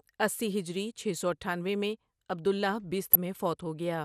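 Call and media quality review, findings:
MP2 compression, throughout: dull top end with a granular, gurgling texture on the speech and upper bands flickering on and off. Likely MPEG Layer II starving the high sub-bands of bits, consistent with a low rate around 80 kbps. Steady across the clip, unlike a burst-type reception error.

DAB burbling, 3.13–3.15 s, right after "اٹھانوے میں عبد اللہ": short blips of noise in single sub-bands over the speech. Probable component is the DAB receive path. Bit errors at roughly 0.1% got past error correction, corrupting the MP2 audio data in 5 frames. It is an isolated burst, not continuous coding dullness.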